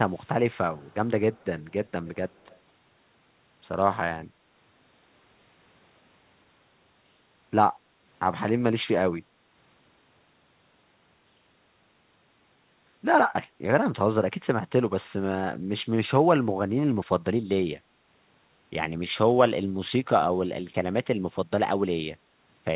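From 0.07 to 0.28 s, 0.81 to 0.94 s, 1.33 to 1.9 s and 2.29 to 2.58 s, a very faint copy of the speech trails the original by about 0.2 s, a little stronger in the last stretch. This is likely an echo leak from a far-end loudspeaker that the echo canceller failed to fully remove. Later, the echo canceller gates the background, turning the microphone down while the loudspeaker plays. The room sound dips by about 6 dB from 7.86 to 8.01 s and from 9.24 to 9.51 s, then returns.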